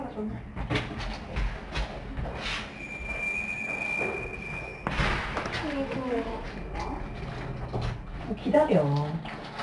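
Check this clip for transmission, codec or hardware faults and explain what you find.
One codec fault runs through the entire clip. 4-bit ADPCM compression, throughout: each sample is coded as a coarse 4-bit step from a prediction, adding gritty level-following hiss, plainly audible. Nothing reaches above 10.7 kHz, which fits a rate near 89 kbps.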